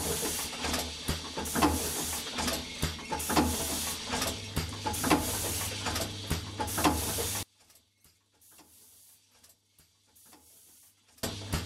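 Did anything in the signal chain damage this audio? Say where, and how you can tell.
Yes. From 7.43 to 11.23 s the sound collapses to a faint residue about 28 dB down, as if its centre had been hollowed out. The likely cause is one channel inverted in the analogue wiring: reversed polarity cancels everything the channels share when summed to mono.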